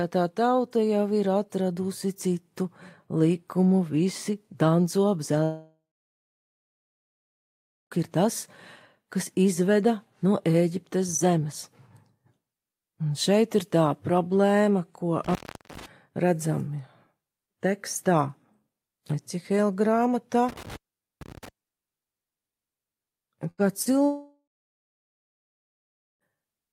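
From 5.43 to 7.94 s the sound breaks off in what is likely a long network dropout. Roughly 2.5 s of audio never arrives. The receiver stretches the last sound into a fading buzz or hiss, then leaves about 2.1 s of silence. On a spectrogram this shows as smeared, decaying bands over an empty block, and the waveform flattens before resuming further on.

At 15.24 to 15.86 s and again at 20.49 to 21.49 s, an intermittent contact opens the line for about 0.40 s and 0.45 s. Each cut is framed by crackle, and only faint hiss remains while the contact is open. On the waveform these appear as sharp spikes at both edges of a near-flat stretch. The spectrogram shows vertical broadband clicks bracketing a dim gap.

At 23.51 to 23.61 s, a burst of packet loss removes about 80 ms. The last sound is carried on and turned down before the audio jumps ahead. The spectrogram shows the last sound continuing and fading out, and the waveform shrinks across the gap.

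From 23.82 to 23.89 s, short concealed packet loss leaves a brief smear. About 40 ms is patched by continuing the preceding sound and blending back in. It appears as a small blurred patch in the spectrogram with no clean transients, and the waveform has a slightly softened envelope.

From 24.06 to 26.37 s there is a second long network dropout, again with a likely network cause. About 2.2 s is lost, and a short fading fill gives way to roughly 1.8 s of silence. This looks the same as the first one: decaying smear, then a blank spectrogram and a flat waveform.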